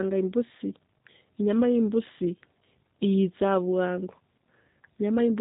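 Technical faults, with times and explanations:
Throughout, G.729 codec: nothing above 3.8 kHz, and the speech is rebuilt from a pitch-and-pulse model, so it sounds plainly rough and synthetic, fitting an 8 kbit/s stream.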